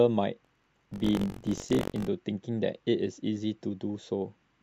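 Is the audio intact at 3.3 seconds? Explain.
Yes, the speech at 3.3 seconds is intact, with no dropout, click, distortion or other fault at that moment.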